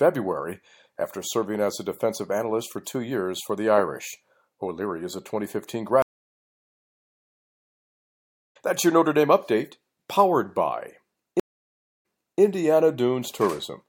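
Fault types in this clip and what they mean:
Stream reconnect: at 6.02 to 8.57 s and again at 11.40 to 12.41 s, just after "update powered by", the connection drops and the player falls silent, then reconnects with a fresh decoder mid-stream. The first gap lasts 2.5 s and the speech resumes about three seconds further on, so a stretch is skipped. The second gap lasts 568 ms and playback restarts 444 ms earlier, repeating material as the server resends a burst.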